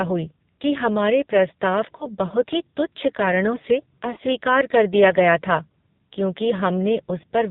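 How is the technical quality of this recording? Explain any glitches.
Technical quality is poor: the speech has passed through a heavily compressed mobile link, and it drops out briefly twice.

Throughout, the AMR narrowband mobile codec is audible. Nothing above 4 kHz survives, so the voice is dull and boxy. The codec rebuilds speech from a vocal-tract model excited by a few pulses per subframe, and at this damage level the result is buzzy and synthetic, which points to one of the lowest AMR-NB modes, around 5.9 kbps.

At 1.98 to 2.08 s and again at 4.14 to 4.18 s there are lost AMR speech frames. Each sounds like a brief dip or warble, consistent with a single missing 20 ms frame. When a frame fails its radio checksum, the decoder fills the gap by repeating the previous pitch and vocal-tract settings at reduced gain. The voice then resumes weak or rough for a moment.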